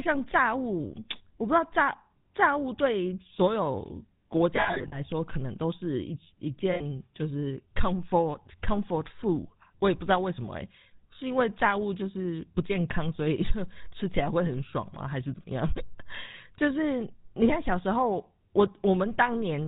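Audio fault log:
throughout — GSM full-rate codec: the speech has that gravelly, buzzy grain and nothing above 4 kHz, which fits GSM full rate at around 13 kbps. The vocal tract is modelled and driven by sparse, regularly spaced pulses, so the rasp is plainly audible.
4.56–5.0 s, 6.72–6.81 s, 15.86–15.91 s — lost GSM frames: the decoder repeats the last good frame's settings, so each gap becomes a rough, metallic ring. At 4.56 s about 220 ms drops out, scattered over 360 ms, with runs up to around 70 ms. The later gaps are 80 ms and 40 ms.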